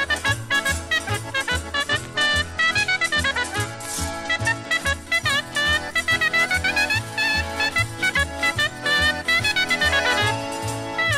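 From 1.73 s to 4.97 s a Bluetooth SBC bit pool drop sets in: treble dulls and gritty quantisation noise rises, which points to the bit pool falling from about 28 to 12, near 96 kbps. Starved upper sub-bands lose detail until the rate recovers.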